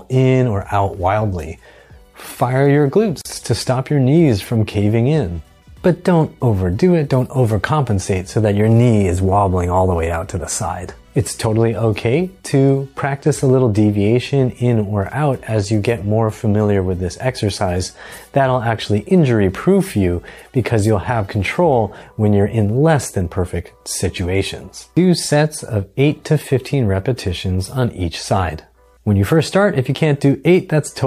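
At 3.21 s a gap at a join of encoded pieces opens in the sound. It lasts about 38 ms and ends at 3.25 s. The audio was encoded as separate pieces and then joined without trimming. The encoder's start-up delay and the padding of the last frame were both kept, leaving this short silence at the seam. It is heard as a brief dropout with smeared edges. The sound then resumes exactly where it stopped.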